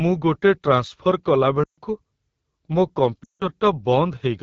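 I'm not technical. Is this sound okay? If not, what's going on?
No. AMR wideband (HD Voice) codec damage runs through the whole recording: the phone-call compression is set to one of its lowest-quality levels, so the speech sounds rough and raspy, because the system is rebuilding the voice from a simplified model to save data.

Lost AMR speech frames cause two dropouts, at 1.64 to 1.79 seconds (about 140 ms) and at 3.23 to 3.47 seconds (about 160 ms). Chunks of the call were corrupted in transmission, so the receiving phone reused the last good sound, letting it quickly drop to near silence before the voice returned weak or rough.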